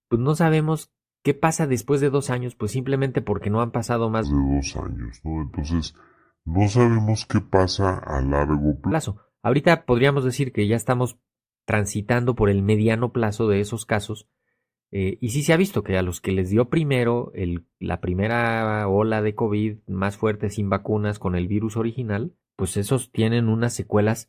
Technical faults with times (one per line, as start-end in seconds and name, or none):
4.24-8.92 wrong sample rate